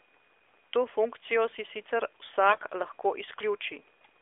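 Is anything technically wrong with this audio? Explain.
Yes. Two short bursts of AMR bit errors break up the speech, from 0.43 to 0.51 s and from 2.50 to 2.63 s. Flipped bits land in the less protected parts of AMR frames, roughly 7 percent of bits in the first burst and about 10 percent in the second, while the frames still pass the checksum. The excitation pulses end up misplaced and the fine gain and spectral values drift, so the speech keeps its pitch and loudness but turns hoarse, scratchy and gargly for those moments. The narrowband line around them, about 300 Hz to 3.5 kHz, fits AMR-NB at its top 12.2 kbps mode.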